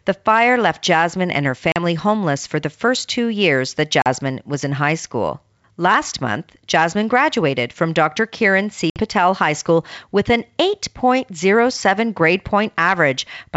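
Speech carried over a G.722 wideband call suffered packet loss on the ADPCM link. About 40 ms was dropped at 1.72–1.81 s, between "and her" and "homeless for the first". Another 40 ms was dropped at 4.02–4.07 s, between "first two years that" and "was in high school". A further 60 ms was lost at 8.90–9.01 s. Each loss leaves a hard-edged silent gap, and the decoder's predictor resumes out of step with the sender, so the speech returns slightly distorted before settling.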